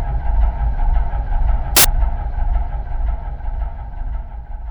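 At 1.77 s the reader stops assembling each sample from the right bytes, so for about 80 ms, until 1.85 s, the audio is made of samples built from the wrong bytes. With the byte order or alignment off, the rapidly fluctuating low-order bits end up as the most significant part of every value. The result is a sudden burst of loud, harsh broadband noise replacing the sound.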